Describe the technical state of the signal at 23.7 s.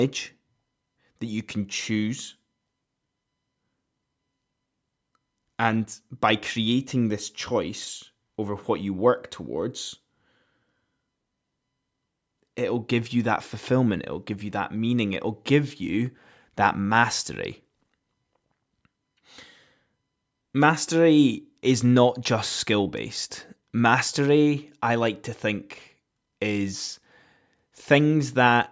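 At 23.7 s the speech signal is intact with no fault, carrying only the ordinary band limit of call microphone processing, which leaves nothing above 8 kHz.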